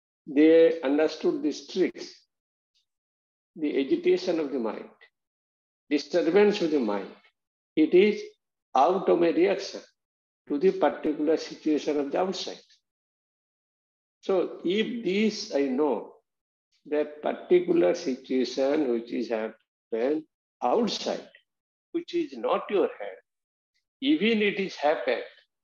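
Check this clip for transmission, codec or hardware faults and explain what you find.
No fault can be heard anywhere in the clip. At no point does the sound change in a way that would suggest trouble along its path.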